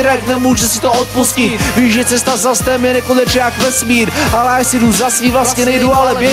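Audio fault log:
Throughout, gain pumping: gain swings by about 5 dB, squashing loud and soft parts closer in level, likely from excessive input gain driving a fast limiter.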